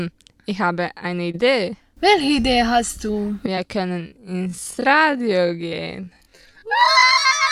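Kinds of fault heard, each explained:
Short concealed packet loss: roughly 20 ms gaps near 1.31, 2.41 and 3.55 s were bridged by extending the preceding sound, leaving brief smears or wobbles.
Time-stretched section: from 3.99 s onward the pace drops to 0.55 times while pitch holds, sounding dragged, likely from stretching software repeating short pieces.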